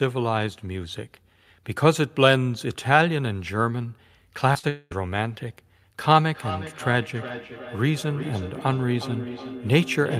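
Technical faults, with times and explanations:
4.53 to 4.57 s and 4.59 to 4.65 s, short concealed packet loss: two brief gaps, about 20 ms and 40 ms, arrived too late for the decoder, so the receiver extended the preceding sound to cover each one and blended back in, leaving a quick smear or wobble.
4.69 to 4.93 s, long network dropout: the sound carries on as a fading synthetic buzz for about 0.22 s, followed by a short moment of silence, then resumes. This is likely a stretch of roughly 220 ms that never arrived and was only ever filled in.
6.20 s to the end, feedback echo between two devices: each phrase returns roughly every 0.4 s, at about 12 dB below the direct sound, thinner on each pass. A second device in the room replays the call into the first one's microphone, outside its echo canceller's reach.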